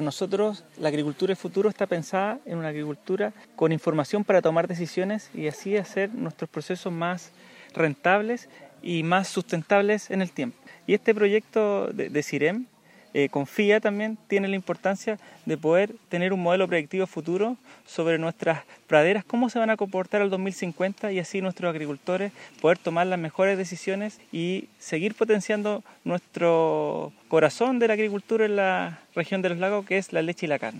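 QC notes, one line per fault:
No technical faults can be heard anywhere in the signal.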